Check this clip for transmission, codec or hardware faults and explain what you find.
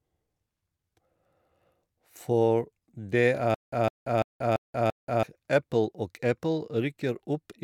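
One transmission fault is present: a stutter with silent gaps from 3.54 to 5.23 s. A fragment of speech about 158 ms long plays, then about 181 ms of dead digital silence follows. The same burst returns five times at an even 339 ms cycle. The likely cause is a stalled player or stream that replays its last buffered fragment at each retry and then runs dry. Whatever audio belonged in that span is lost. Unlike packet-loss concealment, the gaps are true silence rather than smeared fill, and the identical, metronomic repeats distinguish it from scattered random dropouts.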